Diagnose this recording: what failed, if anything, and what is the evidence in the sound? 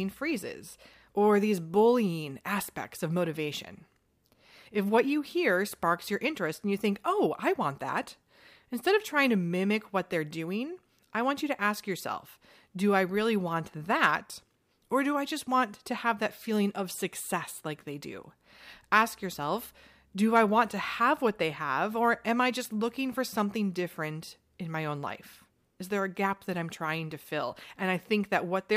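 No fault can be heard.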